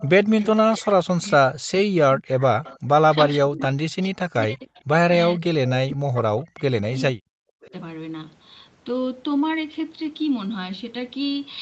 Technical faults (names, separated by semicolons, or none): echo leak; speech suppressed in double talk